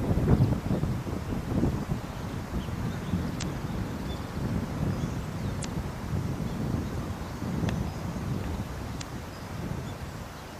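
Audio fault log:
3.39–3.43 s, 5.61–5.65 s, 8.98–9.02 s: damaged data in a compressed stream. Corrupted frames cause decoder misreads and loss of sync, heard as brief chirps or blips of about 40 ms each.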